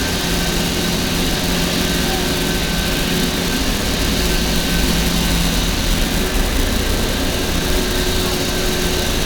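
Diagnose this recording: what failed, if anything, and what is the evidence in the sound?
Nothing in the recording points to a failure at any stage of the chain. No stage shows any evidence of trouble anywhere in the sound.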